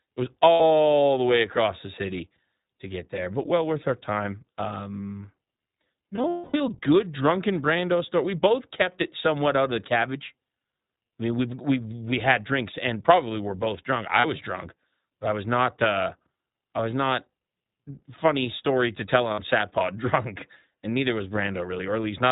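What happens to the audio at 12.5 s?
At 12.5 s, as across the whole speech clip, the signal has been squeezed through the iLBC codec, coding each 20 ms frame independently, which fits its 15.2 kbps mode. Everything above 4 kHz is gone, and the voice sounds clearly rough and synthetic.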